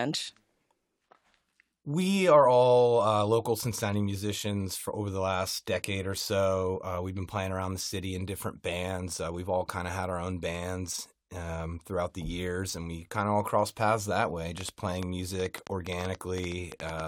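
From 14.58 s to 17.01 s, just after "crossed paths that way", a train of clicks sets in: some twenty near-identical pops at about 7.85 per second, unevenly spaced and roughly 10 dB above the speech. The repeated pulse shape, unlike random crackle, likely points to nearby interference.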